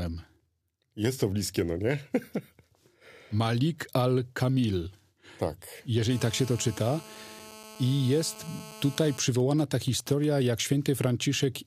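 From 6.11 to 9.18 s a hard, raspy 217 Hz buzz with many harmonics sits about 19 dB below the speech. This is GSM phone buzz: a nearby 2G phone in a call transmits bursts that the audio circuit rectifies.

From 9.28 to 10.25 s the buzz breaks into even ticks with a longer 217 Hz buzz twice a second, roughly 20 dB down. These GSM signalling bursts come from a nearby 2G phone sending only brief burst groups while its user is silent.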